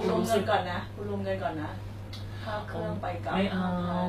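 HE-AAC compression runs through the whole clip, audible from start to finish. The sound is likely from a low-bitrate HE-AAC encode, which fits something around 24 kbps. Only the lower spectrum is truly coded; the treble is rebuilt by copying lower bands upward under a coarse envelope, so its harmonics do not line up with those below. The damage is plainly audible: sibilants turn gritty and metallic, and nothing survives above about 14.9 kHz.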